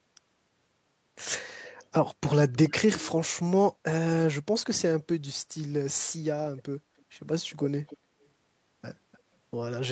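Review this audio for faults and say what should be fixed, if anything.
Echo leak appears six times in this speech: 1.61–1.86 s, 2.52–3.12 s, 6.57–6.62 s, 6.97–7.02 s, 7.87–8.28 s and 9.12–9.2 s. Each is a faint copy of the speech arriving about 0.3 s late. The loudest, at 2.52 s, is about 15 dB below the speech. The rest are quieter. The likely cause is a far-end loudspeaker whose echo canceller let some of the played-back sound return. Better echo cancellation or a headset at that end would prevent it.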